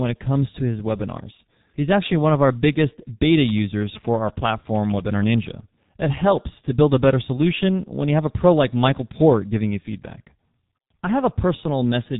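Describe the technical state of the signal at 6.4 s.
At 6.4 s the speech carries G.723.1 codec damage, as it does across the whole clip. The codec cuts everything above about 3.8 kHz, so the sound is dull and boxy. It codes speech in long frames and refreshes its model of the voice only slowly. Fast changes get smeared. The damage is heavy here. The voice turns rough and hoarse, and consonants lose their edges. This fits a very low bitrate near 6.3 kbit/s.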